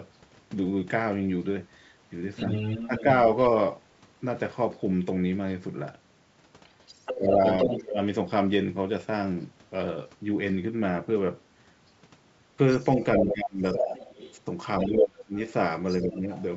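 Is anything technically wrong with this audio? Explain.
Yes. A second voice leaks in underneath the main talker three times: from 2.36 to 3.03 s, from 6.66 to 7.83 s, and from 12.7 to 16.43 s. This is the other side's voice leaking through. It sits only a few decibels below the speech, about 5 dB down. The likely cause is a loudspeaker at the talker's end. The echo canceller did not fully strip that playback from the microphone signal, so the far voice rides along with the near one.

The main voice also drops while the leaked voice is present. This is speech suppressed in double talk. It happens from 2.87 to 3.06 s, 7.13 to 7.99 s, 13.14 to 13.63 s, and 14.88 to 16.29 s. The dips are deeper later in the clip. The first is about 10 dB and the ones near the end reach about 20 to 25 dB. Each lasts from a tenth of a second to under a second. The likely reason is that the canceller could not tell the talker from the echo and turned both down. 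The talker's sound thins and partly cuts out. The wideband telephone coding keeps the band clear up to 7 kHz, with only a faint upper hiss.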